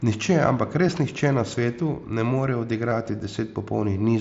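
A barely audible smear at 0.87 s and a brief buzzy hold with a faint warble at 2.90 s are concealed Bluetooth headset packet loss. The receiver covered 7.5 ms, then 15 ms, which fits one and then two lost headset packets, by repeating the best-matching recent waveform.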